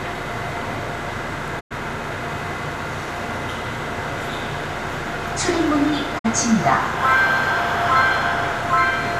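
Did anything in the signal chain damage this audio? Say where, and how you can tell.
Yes, a digital broadcast dropout at the reception stage. The sound fades out over 20 ms and goes silent from 1.59 to 1.73 s, then again from 6.17 to 6.26 s. The receiver muted on corrupt frames, consistent with four and then two lost frames. That audio is gone.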